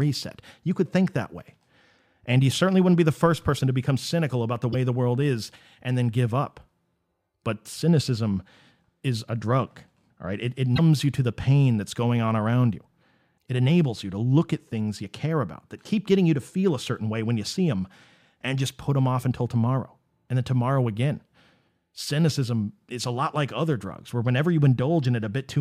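At 4.72 to 4.75 s, just after "become cynical about the" and before "the world is and", the speech skips ahead with a brief glitch. At 10.75 to 10.80 s, just before "you to the pain", the same short break recurs. Both sound like a broken MP3 bit reservoir, likely from dropped frames. The following frame reaches back for borrowed data and decodes the wrong bytes. Each glitch spans one to two frames of about 26 ms.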